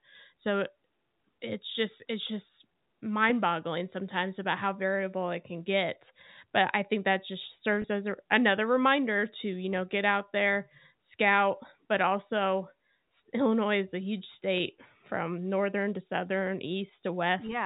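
At 7.82–7.84 s and again at 14.58–14.60 s, packet loss with pitch repetition fills a 20 ms gap, which points to a single lost packet each time. The receiver loops the last pitch period, producing a brief buzzy hold rather than the silent hole or click of a plain dropout, within the narrow G.711 telephone band.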